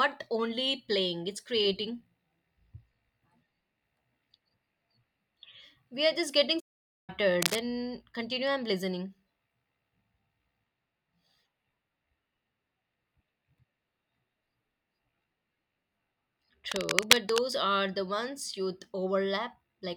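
At 6.59 s the speech cuts to silence until 7.10 s, almost half a second. This playback stall likely comes from the player running short of data. At 7.42 to 7.61 s, and again at 16.69 to 17.42 s, harsh scratching bursts sit over the speech at roughly its own loudness. This cable scratch noise likely comes from a loose connector being moved.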